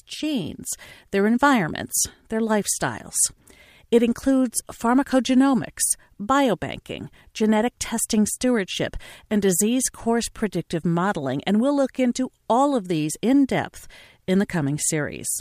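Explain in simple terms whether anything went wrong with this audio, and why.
Nothing went wrong here.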